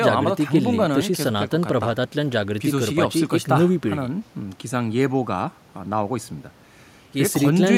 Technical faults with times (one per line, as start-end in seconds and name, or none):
none